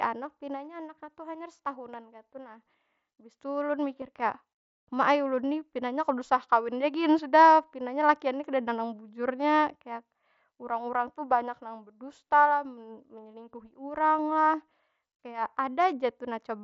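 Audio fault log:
4.01 s, concealed Bluetooth headset packet loss: a barely noticeable smear just before "kaya ma ai". About 7.5 ms of audio, consistent with a single lost packet, went missing between headset and phone, and the receiver bridged it by repeating the closest-matching stretch of preceding waveform.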